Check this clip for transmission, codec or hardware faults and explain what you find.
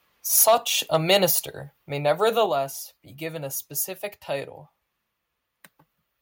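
Two microphone-side problems are audible, both tied to an input level set too high.

Microphone overload, 0.35 to 0.55 s and 0.94 to 1.17 s: the loudest syllables turn harsh and crackly, worse in the first stretch. Peaks likely exceed the converter's ceiling, by about 7 dB and then about 2 dB, so their tops are sheared flat.

Microphone volume stepped down, at 0.43 s, 1.44 s and 2.46 s (just before "be given a specific"): voice and background drop abruptly together, by about 2 dB, then about 4 dB twice. The call software likely cut the device's input gain in single steps after detecting clipping.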